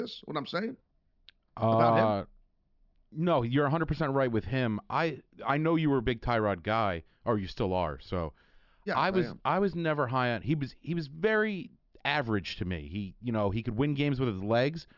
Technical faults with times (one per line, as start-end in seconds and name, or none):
none